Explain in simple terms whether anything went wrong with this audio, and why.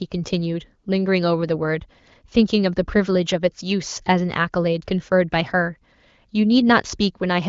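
Nothing went wrong with this speech recording. It has passed through an AMR wideband (HD Voice) phone codec working as intended, which is why there is no sound above about 7.4 kHz.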